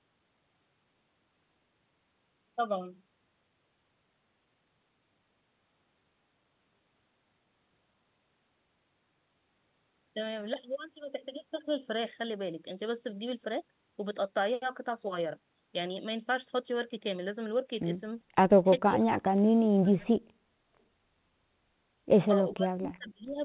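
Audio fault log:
18.8–20.21 s and 22.54–23.37 s, speech suppressed in double talk: the talker's level dips sharply, by up to about 40 dB in the first stretch and about 35 dB in the second, likely because the echo canceller, facing both sides at once, mistook the near voice for loudspeaker echo and turned it down. Unlike packet loss, the gaps are gated fades without clicks or repeated fragments, and the call path's steady 4 kHz narrowband ceiling stays unchanged throughout.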